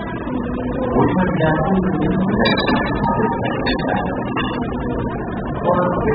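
A short recording of sounds carries AAC compression damage throughout: nothing remains above 5 kHz, leaving it dull and smeared. A spectrogram would show a hard ceiling, with the likely cause a very low bitrate around 8 kbps.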